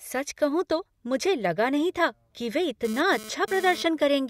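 From 2.85 to 3.83 s, a GSM phone buzz cuts into the speech. It is a hard, raspy tone at about 217 Hz, rich in harmonics. It sits about 15 dB below the speech and has nothing to do with it. A nearby 2G phone was transmitting in short radio bursts at that rate. The audio circuit rectified those pulses into sound. The buzz arrives and stops rather than holding steady, which points to a data transfer.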